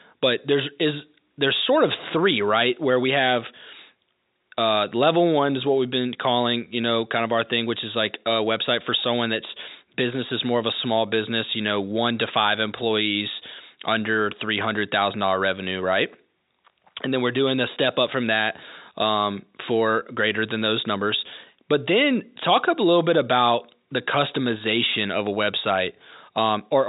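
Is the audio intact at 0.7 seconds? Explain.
Yes, the audio is intact at 0.7 seconds: there is no fault there, only the telephone-band sound of G.711 coding with nothing above about 3.8 kHz and faint room noise well below the speech.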